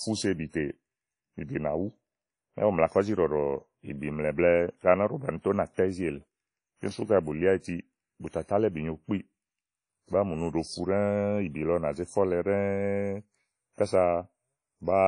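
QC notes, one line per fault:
throughout, WMA compression: likely a low-bitrate WMA transform encode, fitting roughly 32 kbps, whose long blocks smear quantisation noise over tens of milliseconds and drop weak spectral lines. The speech rings and sounds washy, with hiss that breathes alongside it, and nothing above 10.1 kHz.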